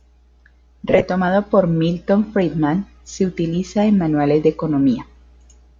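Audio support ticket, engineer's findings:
Lost LE Audio frames, 0.88–1.04 s. Speech breaks into short noisy smears across 150 ms, about half concealed, longest gap around 20 ms. LC3 decoder reusing the last spectrum with random signs. Spectrogram shows harmonics blurring into broadband patches. Waveform shows ragged segments.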